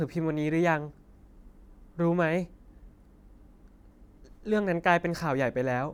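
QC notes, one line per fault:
No faults detected.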